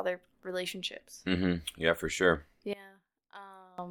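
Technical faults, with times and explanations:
2.73 to 3.78 s, one channel inverted: right after "for sure" the speech drops by about 23 dB, with the centred voice nearly gone, leaving only a faint residue. The likely cause is reversed polarity on one stereo channel. When the two channels are summed to mono, the material common to both cancels, and only the small difference between them survives.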